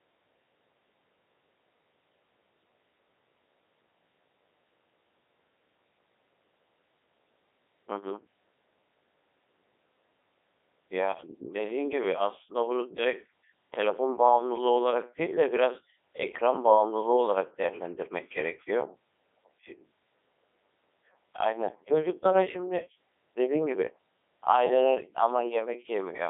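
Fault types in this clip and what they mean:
Codec 2 vocoder: The speech sounds robotic and buzzy throughout. It is confined to a telephone-like band from about 300 Hz to 3.6 kHz, with nothing at all above 3.8 kHz. The decoder never receives the original waveform. It rebuilds the voice from sine waves, steered only by transmitted pitch, voicing, energy and a coarse spectral envelope. The heavy smearing and synthetic tone fit Codec 2's 3.2 kbit/s mode.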